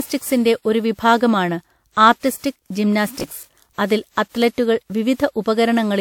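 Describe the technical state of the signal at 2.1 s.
Right at 2.1 s there's a short burst of hard clipping, from 2.06 to 2.10 s. The peaks push about 1 dB past what the chain can pass, so they're sliced flat, and those squared-off tops throw harmonics high up. You hear it as a brief crackle on the peak.

Underneath, as everywhere in the clip, the speech has that swirly, hollow, smeared quality with soft attacks, and nothing above 19.4 kHz. That's likely generation loss: several rounds of lossy encoding, which fits about five passes through WMA at 96 kbit/s.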